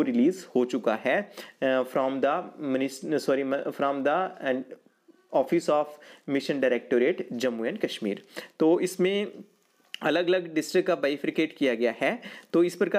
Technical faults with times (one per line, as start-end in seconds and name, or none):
0.00-12.98 crude rate conversion